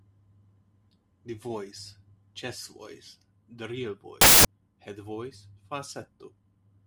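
From 4.21 to 4.45 s the speech gives way to a burst of loud, harsh broadband noise: samples built from the wrong bytes. The reader misassembles each sample's bytes, so the rapidly changing low-order bits land in the high-order position, turning the signal into broadband hiss.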